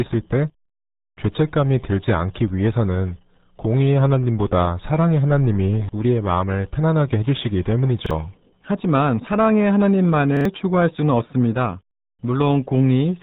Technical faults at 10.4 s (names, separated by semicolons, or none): RealAudio 14.4 codec; repeated buffer